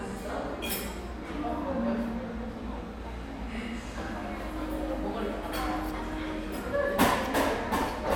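DAB burbling at 3.55 to 3.66 s and again at 7.82 s: residual bit errors corrupt sub-band levels, giving brief blips of noise, seen as scattered isolated blocks flaring in single frequency bands.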